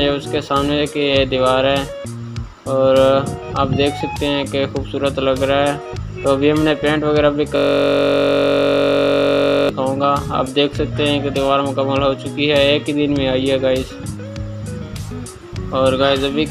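From 7.56 to 9.69 s, a system hang loop repeats one 21.33 ms slice, fitting a 1024-sample buffer. It sounds like a steady buzz near 47 Hz.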